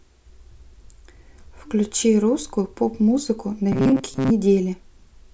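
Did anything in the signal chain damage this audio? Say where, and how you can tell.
Yes. From 3.72 to 4.31 s the speech becomes a rigid, metallic buzz at 133 Hz, the robotic sound of repeated short buffers. The driver/buffer stage is likely, looping roughly 7.5 ms chunks over about half that span. A spectrogram shows flat harmonics every 133 Hz, and the waveform shows identical repeating cycles.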